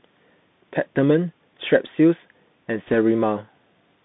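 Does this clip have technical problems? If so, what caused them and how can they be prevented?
Yes. The call audio went through the Bluetooth CVSD headset codec, which codes the signal one bit at a time as a rising or falling step of adaptive size, consistent with a 64 kbps link. The line passes only about 150 Hz to 3.7 kHz, so the speech sounds thin and boxed-in. Throughout the clip, fast loud high-frequency sounds outrun the step size and distort, sibilants come out scratchy, and a granular hiss sits under the speech. To prevent this, use a wideband headset profile such as mSBC or LC3, or record on a wired or local microphone.

From 2.88 to 2.95 s there are bit errors on a Bluetooth voice link. Over those 70 ms, bits in the CVSD stream were flipped, at a rate of roughly 2 percent. No CVSD bit outweighs the others, and the decoder's adaptation lets each error fade out. So there is no sharp click, just a brief rushing, crackly noise laid over the speech. 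To prevent this, keep the headset close to the phone or computer with a clear line of sight, and away from crowded 2.4 GHz interference.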